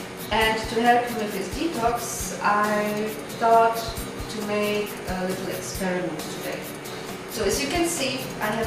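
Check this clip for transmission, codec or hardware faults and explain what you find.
No faults detected.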